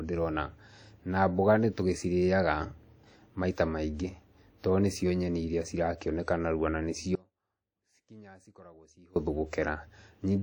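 WMA compression throughout the speech: plainly audible ringing, washy quantisation noise, likely from WMA transform encoding at a rate that fits about 48 kbps. Audio dropout to a faint residue, 7.15 to 9.16 s: the signal abruptly vanishes for 2.01 s, leaving a faint leak roughly 25 dB down, likely a lost source feeding a live path.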